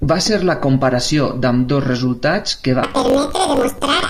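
From 2.83 s to the end at 4.09 s, planar audio is being read as interleaved. Each block of roughly 21.33 ms, which fits 1024-sample blocks, plays twice at double speed, so the speech jumps an octave high with a flutter at about 46.9 Hz.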